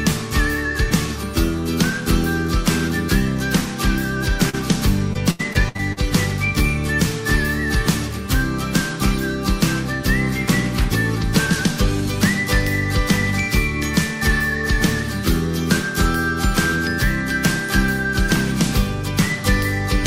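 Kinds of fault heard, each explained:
Short concealed packet loss: At 4.49 s, about 40 ms of audio failed to reach the decoder in time. The receiver covered the hole by extending the preceding sound, repeating its periodic content or substituting shaped noise, for roughly 36 ms. It then crossfaded back into the real signal at 4.55 s. The result is a brief smear in the sound lasting a few hundredths of a second.
Repeated packet loss (robotic sound): From 5.13 s to 5.99 s, losses recur in quick succession, with six separate gaps totalling about 240 ms of missing audio. The longest gap is about 81 ms. Each gap is patched by extrapolating the last received sound, and concealment fills roughly 27 percent of the stretch. Because one patch follows closely on the last, the passage sounds choppy, with fragments dropping out throughout that span.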